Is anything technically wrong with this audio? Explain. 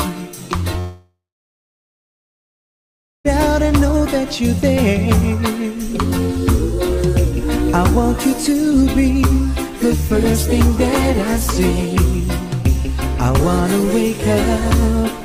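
Yes, one problem. From 0.79 to 3.27 s, likely a long network dropout: the sound smears into a fading buzz, then about two seconds of silence, and that part's lost.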